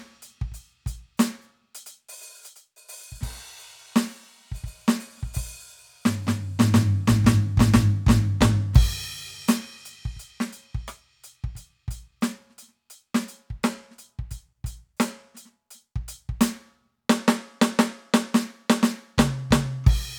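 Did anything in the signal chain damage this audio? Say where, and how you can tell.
Yes. At the driver or buffer stage, a handful of samples were likely dropped from the stream, making the waveform jump straight to a later value. At 9.04 s the music carries a single sharp click, lasting well under a millisecond, with nothing audibly missing.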